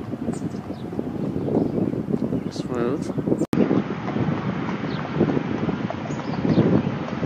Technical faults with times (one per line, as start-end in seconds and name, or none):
3.45-7.26 input switched to a poorer device